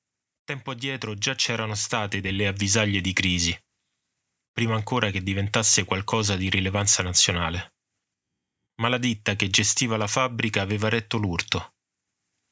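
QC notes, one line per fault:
0.79–2.68 s, automatic gain rising: the speech and the background noise beneath it swell together, the level climbing smoothly by about 8 dB over nearly two seconds before settling just ahead of "di crisi". The automatic gain control judged the input too quiet and raised its gain gradually, so it lifts everything at once rather than the voice alone. The call microphone processing behind it leaves nothing above 8 kHz.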